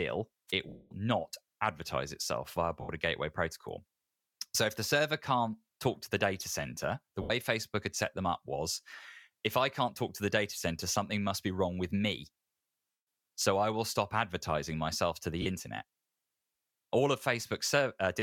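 A brief swish of static at 0.48 to 0.52 s is a wireless microphone noise hit: the analogue FM radio link faded as reflected signals cancelled, and receiver noise rose over the speech for those few tens of milliseconds.

Then come lost LE Audio frames, heard as the speech turning into a noisy, smeared hiss that fades away. The longest, from 0.68 to 0.91 s, lasts 230 ms and sinks toward silence just before "not advertise itself via". The others fall at 2.81 to 2.89 s (80 ms), at 7.22 to 7.30 s (80 ms) right after "the data center the", at 12.91 to 13.07 s (160 ms), and at 15.42 to 15.46 s (40 ms) after "stop advertising myself to". In each gap the LC3 decoder kept replaying the last received spectrum with randomised phase and faded it out, which fits runs of 10 ms frames dropped on the Bluetooth link.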